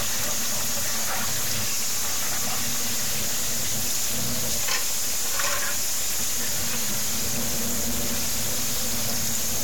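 From start to finish, the sound is coarse and gritty. The grain rises and falls with the sound itself. The error is roughly as loud as the sound. Quiet passages break up badly, and the faintest parts cut to silence or sputter. The likely cause is low bit depth without dither. The audio fits about 3 bits, with values truncated rather than rounded, so every level is forced onto a few steps.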